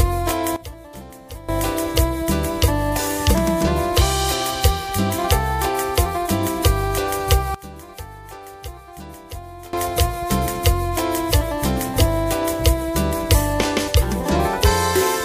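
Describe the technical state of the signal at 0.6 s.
At 0.6 s you're right inside a sudden gain jump running from about 0.56 to 1.49 s. The level drops by about 18 dB in a single step, sound and background noise together, then snaps back. It's likely a digital gain change applied with no ramp.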